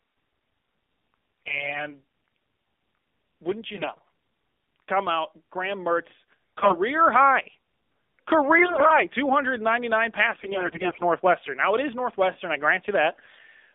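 The speech has passed through an AMR narrowband mobile codec at a low bit rate, its buzzy, synthetic texture fitting a mode near 7.4 kbps. The line is confined to about 250 Hz to 3.6 kHz, so the voice sounds thin and telephone-like throughout.

AMR bit errors then corrupt the weakly protected bits of frames from 1.46 to 1.87 s, 3.74 to 4.08 s, 6.57 to 6.76 s, 8.58 to 9.04 s, 10.34 to 11.02 s and 13.10 to 13.41 s, with the worst around 8.6 s. Misplaced excitation pulses make the voice hoarse, scratchy and gargly while its pitch and level roughly hold.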